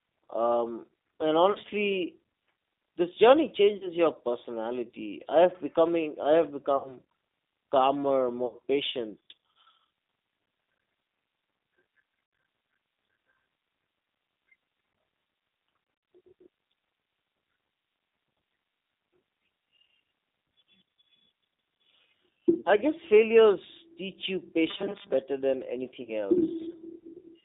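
Throughout the speech the G.729 codec (the G.729A variant at 8 kbit/s) is plainly audible. Its pulse-based excitation makes voicing rough and slightly synthetic. A spectrogram shows energy confined to roughly 200 Hz to 3.7 kHz, with smeared, grainy harmonics instead of clean striations.

VoIP packet loss concealed by the speech codec occurs at 1.52 to 1.58 s (30 ms lost), 3.77 to 3.91 s (40 ms), 6.77 to 6.98 s (80 ms), 8.46 to 8.55 s (60 ms), 12.26 to 12.33 s (70 ms), 15.84 to 16.08 s and 22.61 to 22.66 s (40 ms). At 15.84 s about 160 ms of frames go missing in scattered runs of up to 50 ms across 240 ms. In each gap the decoder keeps replaying its last pitch and filter at falling gain, so the sound stretches into a fading buzzy tone or coloured noise. On a spectrogram this appears as frozen horizontal harmonics. The waveform shows a decaying, unnaturally periodic stretch, and it stays weakened briefly after the gap.

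Robotic sound from repeated short buffers follows at 24.70 to 25.13 s, a rigid metallic buzz near 200 Hz. This is likely caused by roughly half the audio being replaced with repeats of a 5 ms buffer. A spectrogram shows evenly spaced 200 Hz comb lines, and the waveform shows identical 5 ms cycles.

A final packet-loss concealment appears at 26.03 to 26.11 s, with 50 ms lost and a fading extension.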